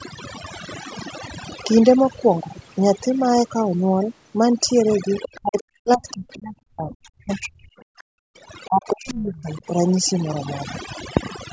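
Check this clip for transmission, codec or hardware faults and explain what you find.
There are three kinds of fault here, and the band stopping at 8 kHz points to a 16 kHz call path.

Overdone noise removal runs through the whole clip. The noise reducer is pushed so hard that bands near its noise estimate get switched off, taking quiet parts of the speech with them. You get a near-silent background with twinkly specks.

Other side's voice leaking through shows up briefly from 5.22 to 5.37 s: a short scrap of a second voice sitting about 15 dB under the talker. It's likely the far end playing on the loudspeaker and the echo canceller not scrubbing it all from the mic.

Speech suppressed in double talk follows right on from 5.33 to 8.12 s, with about two seconds of it affected and drops of roughly 40 dB. It happens again from 8.66 to 9.63 s, about a second in total, dipping roughly 30 dB. 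The talker's voice sinks, dulls and breaks up in pieces. That's likely the canceller failing to separate the talker from the echo and ducking both.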